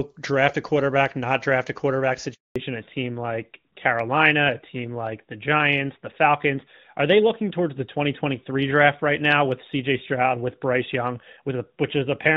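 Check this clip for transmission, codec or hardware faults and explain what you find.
Two linked faults occur, both at the same point just after "not draft a quarterback": a handover gap, followed by a fallback to narrowband that lasts to the end.

Handover gap, 2.34 to 2.56 s: the sound cuts out within a few tens of milliseconds and stays silent for 220 ms. This is what happens when a call is passed from one network link to another and no speech frames arrive while the new link is set up. Whatever was said during those 220 ms is gone, not muffled, and the audio simply resumes when the new path starts carrying frames.

Fallback to narrowband, 2.56 s onward: the bandwidth collapses, with nothing left above 4 kHz. Before the gap, the audio has full wideband character with faint or no codec damage, consistent with AMR-WB near 23.85 kbit/s. After it, the speech sounds duller and rougher, which points to the call renegotiating onto AMR-NB around 12.2 kbit/s across the handover. 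The missing upper band strips sibilance and crispness from consonants for the rest of the clip.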